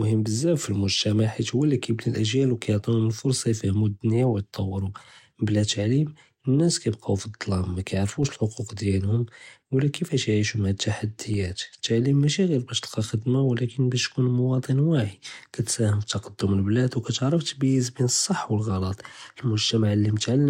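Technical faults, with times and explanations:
8.23 s and 11.34 s, DC step: the waveform's zero line abruptly shifts by about -32 dBFS at each point, just before "אלח'וקוק דיעלהם ולא כיפאש" for the first. The sudden offset registers as a low thump. A 20 Hz high-pass then lets each offset decay back toward zero while the speech continues unchanged.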